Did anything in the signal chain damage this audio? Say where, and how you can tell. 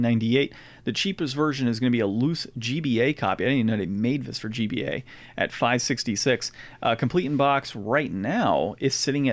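No, nothing in the signal chain has audibly damaged this speech recording, and no stage from capture through playback leaves a mark on the signal.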